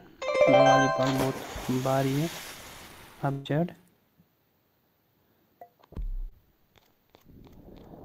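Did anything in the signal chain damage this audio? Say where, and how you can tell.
Yes. The damage is on the network. A burst of packet loss runs from 3.31 to 3.47 s. About 140 ms of audio never arrived. The receiver extended the last sound through the gap while fading it. Playback then picks up later, with that stretch gone.

A short concealed packet loss follows at 6.29 to 6.33 s. About 20 ms missed the decoder's deadline. The receiver covered the hole by continuing the preceding sound, then blended back into the real signal. It comes across as a brief smear.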